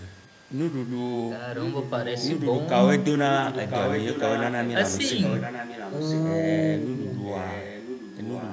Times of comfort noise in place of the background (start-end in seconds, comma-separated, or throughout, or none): none